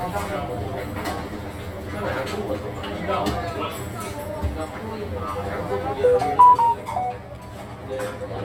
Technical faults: channel delay (comb filtering)

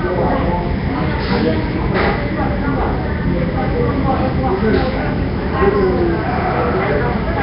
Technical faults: Nellymoser compression

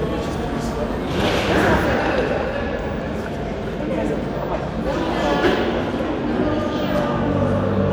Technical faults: none

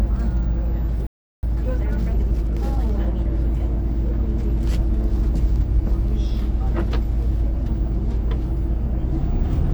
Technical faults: playback stall; time-compressed catch-up

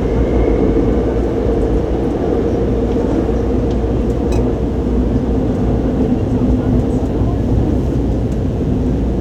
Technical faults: mains buzz

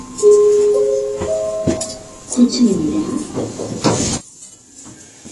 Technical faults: AAC compression; one channel inverted

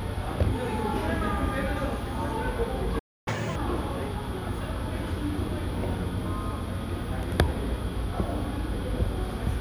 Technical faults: playback stall; catch-up at higher speed

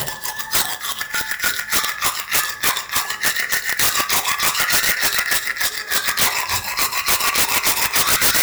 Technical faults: integer overflow

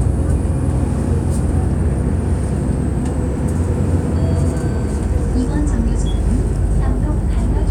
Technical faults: none

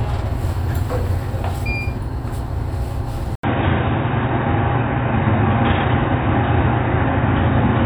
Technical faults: input switched to a poorer device

